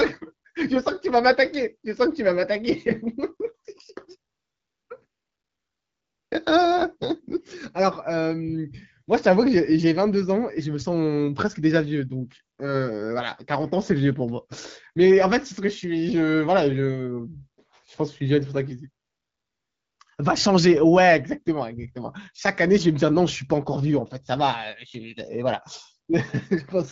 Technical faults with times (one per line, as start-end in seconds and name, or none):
4.33-6.31 AMR comfort noise
19.05-19.99 AMR comfort noise